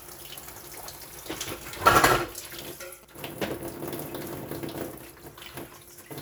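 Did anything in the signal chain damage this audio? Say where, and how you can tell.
Yes. From 1.62 s to 3.99 s the analogue wiring picks up GSM signalling bursts: a galloping dit-dit-dit of short buzzes roughly 20 dB below the sound. A nearby 2G phone is sending short groups of radio bursts, and the audio circuit rectifies that RF into audio-band pulses repeating at 217 Hz. On a spectrogram the stretch shows as stacked horizontal lines at 217 Hz and its harmonics, switching on and off in clusters. On the waveform it shows as trains of sharp, evenly spaced spikes.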